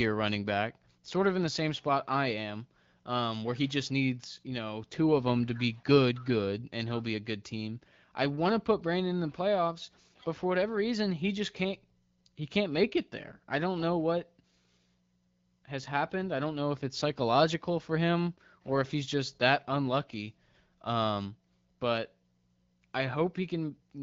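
No technical faults can be heard in this speech clip, which carries the band-limited sound of the AMR wideband (HD Voice) codec at a rate high enough to keep it clear.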